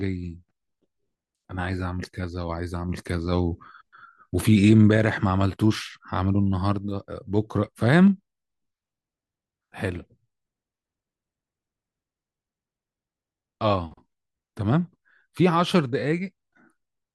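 No technical faults can be heard anywhere in this recording.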